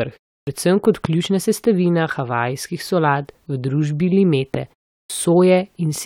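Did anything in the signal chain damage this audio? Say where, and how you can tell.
Yes. Clipped start after a pause at 0.41 s, before "predvsem kot ključna sestavina", and at 5.04 s: the playback device slept through short pauses and swallowed about 60 ms on waking.

Loud pop at 1.05 s, between "predvsem kot" and "ključna sestavina havajskih solat", and at 4.55 s after "havajskih solat v družbi": single sharp transients, about 15 and 10 dB above the speech, likely voltage steps in analogue wiring.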